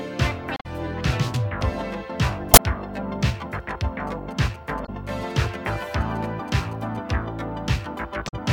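From 0.54 to 0.66 s and again from 2.52 to 2.59 s, damaged data in the compressed stream knocks the decoder out of sync while it searches for the next frame header. From 4.07 to 6.97 s, GSM signalling bursts from a nearby phone are rectified by the audio circuitry, adding a galloping dit-dit-dit of short 217 Hz buzzes roughly 20 dB below the sound. The same stream damage recurs from 4.82 to 4.89 s, inside that buzzing, and from 8.25 to 8.34 s.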